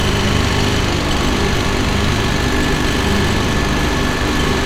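No technical faults are audible anywhere in this recording of sounds.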